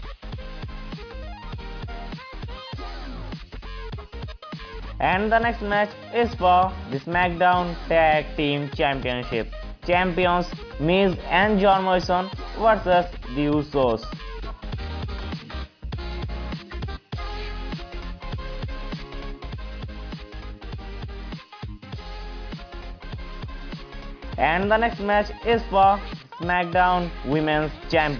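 Nothing stood out as a technical problem anywhere in this audio on listening.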